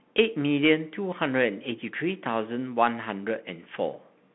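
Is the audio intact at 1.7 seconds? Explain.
No. At 1.7 seconds, as throughout the clip, the speech sounds thin and boxed in, with s sounds gritty and a grainy hiss beneath. This is the Bluetooth CVSD headset codec. The line passes only about 150 Hz to 3.5 kHz. Each sample is coded as a single up-or-down step whose size adapts, consistent with a 64 kbps stream. Loud, bright sounds climb faster than the step can follow, so they distort and turn scratchy.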